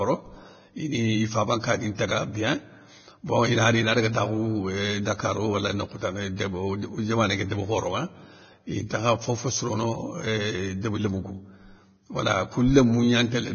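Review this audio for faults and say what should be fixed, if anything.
Vorbis compression runs throughout the clip. The speech has nothing above 6.5 kHz, and the treble below that cut-off is quantised so coarsely that detail becomes grainy hiss, roughening tones and blurring attacks. The damage is heavy and likely comes from low-quality Vorbis encoding, which fits a bitrate of about 18 kbps. To prevent it, encode from the original source at a much higher bitrate or quality setting, or keep a lossless copy.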